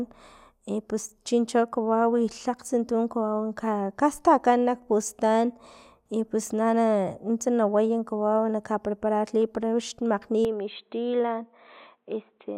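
Input switched to a poorer device, from 10.45 s to the end at 12.58 s: the speech suddenly turns dull and boxy, with nothing above about 4.1 kHz, and it drops to a slightly lower level. A faint new background noise sits well below the speech. There is no gap at the changeover. The likely cause is the recording input moving to a narrower-band microphone or a headset's call profile, which brings its own tone, level and noise.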